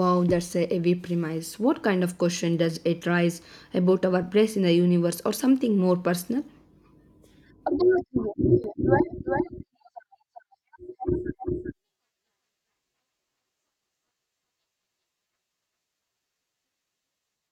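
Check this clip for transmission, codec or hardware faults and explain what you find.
One fault is present. Doubled audio track, from 8.64 s to the end: a second copy, likely captured again by a slower path, trails about 400 ms behind, a few decibels quieter, cutting in abruptly with no decay or room colour.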